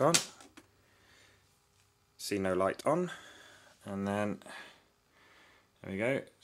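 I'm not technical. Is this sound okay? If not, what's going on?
No, not quite. At about 2.81 seconds there is a small skip, a tiny jump forward where a sliver of the sound, roughly a fiftieth of a second, is missing and the two sides are stitched together with no gap. This is audio missing between chunks. The likely cause is that the recording was handled in one-second pieces, and a moment was lost while one piece closed and the next one opened.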